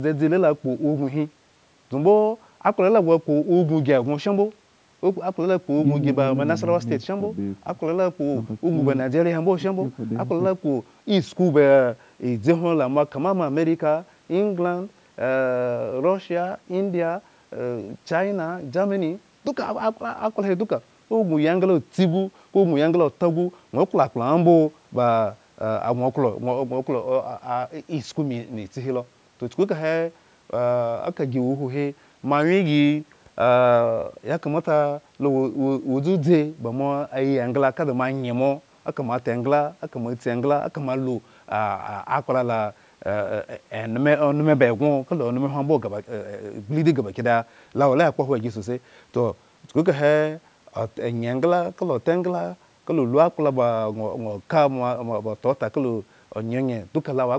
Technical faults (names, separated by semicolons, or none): none